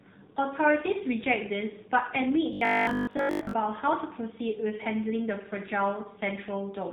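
Throughout, AMR narrowband mobile codec damage cuts everything above 4 kHz and leaves a buzzy, synthetic edge. That fits a low rate near 7.4 kbps, rather than simple band-limiting.

From 2.53 to 3.53 s the speech becomes a rigid, metallic 50 Hz buzz. This is robotic sound, likely from repeated short buffers of about 20 ms standing in for most of the real audio. Unlike the codec's buzz, its pitch stays locked.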